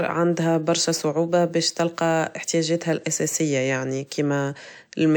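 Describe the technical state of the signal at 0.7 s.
At 0.7 s, as through the whole clip, the speech carries transcoding between lossy codecs, likely an MP3 96 kbit/s encode re-encoded as WMA 96 kbit/s. Two sets of smeared, swirly artefacts overlap with content stopping near 20 kHz, unlike a single codec's one consistent coloration.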